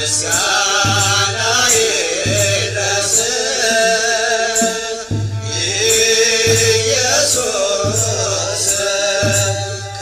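No technical faults detected.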